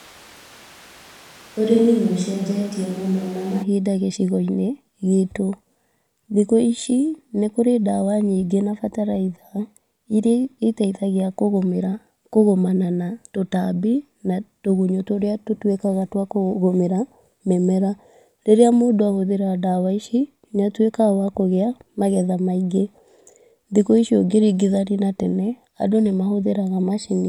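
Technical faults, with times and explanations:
0 to 3.62 s, switch to a distant microphone: the speech opens roomy and hollow, thin in the bass, with room noise roughly 25 dB below it at much the same level, then turns abruptly close, likely because the close microphone's feed was missing and a farther one covered.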